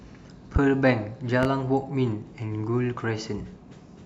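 A voltage spike, likely from a switch, plug or driver glitch, enters the signal path twice, producing a loud pop from 0.56 to 0.60 s and again from 1.43 to 1.47 s. Each sharp thump peaks well above the speech, which continues underneath.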